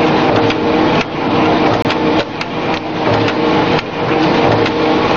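At 1.82 s the sound drops out for roughly 25 ms, ending at 1.85 s, with abrupt edges on both sides. This is a gap between stream segments: the timestamps of two adjacent pieces of the stream, which appear to be 2 s long, do not quite meet, and the player pads the missing span with silence. Nothing is removed; about 25 ms of silence is inserted into the timeline, so the audio after the hole is delayed by that amount.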